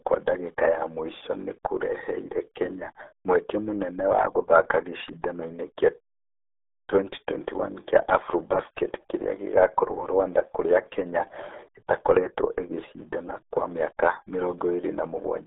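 From start to finish the speech carries the marks of the RealAudio 14.4 codec. Nothing reaches above 3.7 kHz and little sits below 250 Hz, so voices sound boxed and muffled, and heavy coding damage adds a gargling, bubbly texture to every syllable. That texture is what separates it from a plain telephone band-limit, which narrows the sound without smearing it. The damage fits a very low bitrate of around 8 kbit/s.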